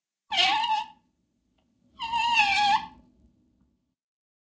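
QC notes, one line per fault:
throughout, resampler restarted on every block: the 48 kHz to 16 kHz conversion was run afresh on each 20 ms block, leaving an edge error every block, heard as a 50 Hz buzz that rides only on the signal and vanishes in gaps, unlike steady mains hum.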